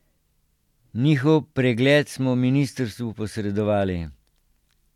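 A speech recording with nothing technically wrong with it.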